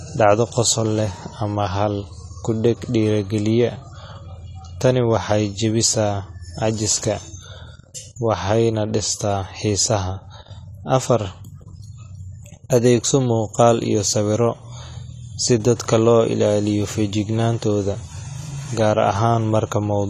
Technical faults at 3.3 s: AAC compression

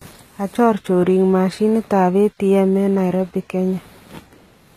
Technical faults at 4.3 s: HE-AAC compression

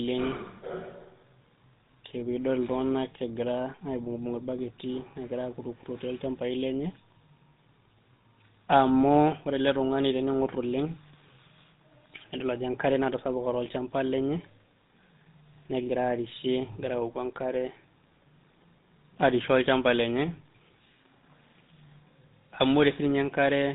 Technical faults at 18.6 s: GSM full-rate codec

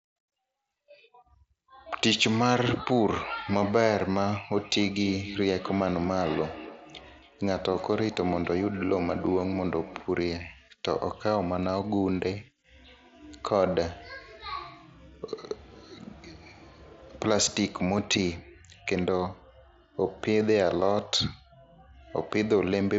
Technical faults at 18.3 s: none

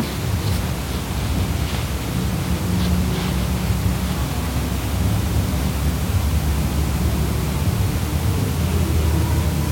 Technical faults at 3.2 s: none

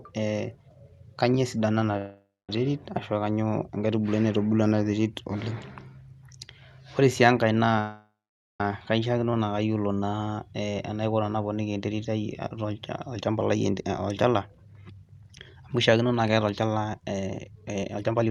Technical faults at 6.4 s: none

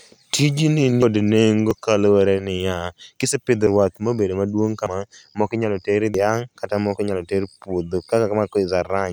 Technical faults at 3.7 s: dropped buffer (overrun)

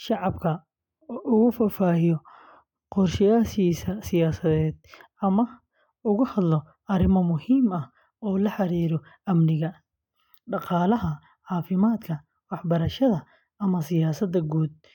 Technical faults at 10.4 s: none

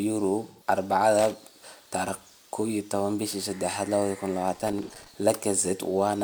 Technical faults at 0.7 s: AAC frame loss with concealment

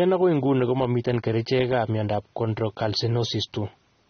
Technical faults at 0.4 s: AAC compression

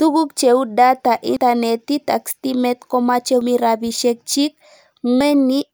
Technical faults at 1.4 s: dropped buffer (overrun)

